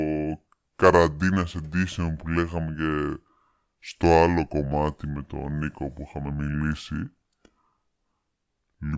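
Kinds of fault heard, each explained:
Wrong sample rate: the audio runs through at about 0.73 times its proper speed, with pitch sagging roughly 5.5 semitones, so the speech sounds low and slow throughout. That fits material recorded near 22 kHz being played at 16 kHz without conversion.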